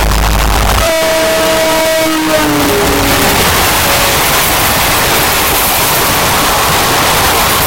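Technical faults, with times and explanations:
Throughout, signed and unsigned mixed up: loud, harsh distortion even in quiet stretches, likely 8-bit samples read with the wrong sign, far beyond plain 8-bit graininess.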